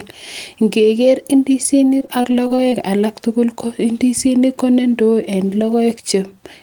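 From 1.99 to 2.74 s the speech breaks up with repeated packet loss, the robotic-sounding kind. Over that stretch there are seven short holes, none longer than about 20 ms, and each one gets patched by stretching out the sound that came just before it. About a sixth of that span is filled-in material rather than real audio. So you hear a choppy flutter across the whole window, with little slivers of speech missing.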